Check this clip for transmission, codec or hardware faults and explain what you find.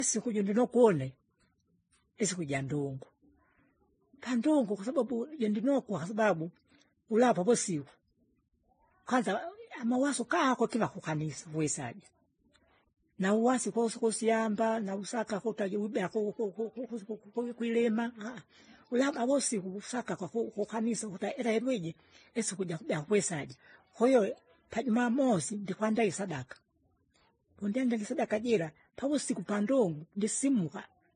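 One codec fault runs through the whole clip. Transcoding between lossy codecs is the likely cause: the speech seems to have been encoded at a low bitrate, re-encoded as MP3, then encoded as Vorbis again. Each stage compressed the previous stage's artefacts and added its own. Nothing remains above 9.8 kHz, and the artefacts of the different codecs are heard together.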